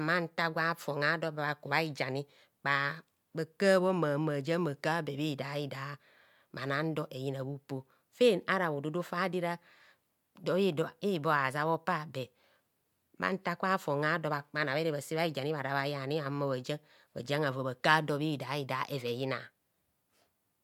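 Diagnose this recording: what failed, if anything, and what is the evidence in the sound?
Nothing stood out on listening to this speech recording that would point to a failure at any stage of the chain.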